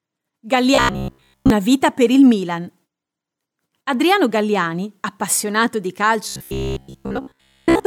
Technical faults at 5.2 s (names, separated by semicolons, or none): none